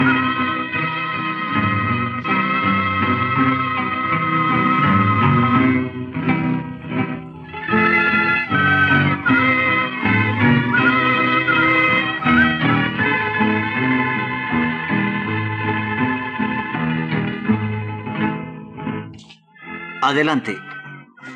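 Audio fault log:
No faults detected across the clip.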